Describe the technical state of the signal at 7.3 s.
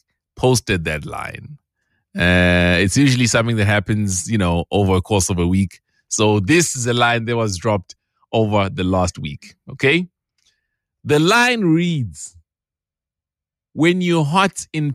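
At 7.3 s the signal is intact, with no dropout, clipping, glitch or other fault to be heard at that moment.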